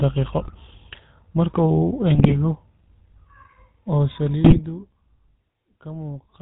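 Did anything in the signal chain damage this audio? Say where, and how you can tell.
Yes. At the codec stage, the GSM full-rate codec is audible across the whole clip as a buzzy, gravelly roughness on the speech, which fits the 13 kbps full-rate coder. It rebuilds the voice from a vocal-tract filter excited by a sparse, regular pulse train, so fine detail is lost and harmonics smear into a rasp. On a spectrogram nothing appears above 4 kHz, and voiced regions show a grainy, comb-like texture.

At the network stage, GSM bit errors break the speech into squawks, pops and gargling at 0.43–0.53 s, 2.15–2.34 s and 4.44–4.61 s. Corrupted bits arriving at the decoder distort the filter, pitch and gain values, so each hit frame comes out with a warped spectrum or a sudden level jump. A spectrogram shows short smeared or bright blocks at those times, and the waveform shows abrupt amplitude spikes.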